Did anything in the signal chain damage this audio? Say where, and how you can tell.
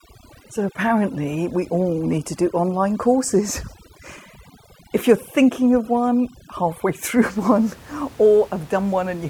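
Yes: overdone noise removal in call processing, 0.0 to 7.26 s, cuts bands near its noise estimate, leaving twinkling near-silence.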